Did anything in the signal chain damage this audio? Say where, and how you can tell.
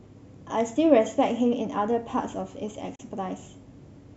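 Yes: a digital broadcast dropout at the receiver. At 2.95–3.00 s the speech fades within 8 ms to silence, consistent with one lost frame, rather than packet-loss concealment filling the gap.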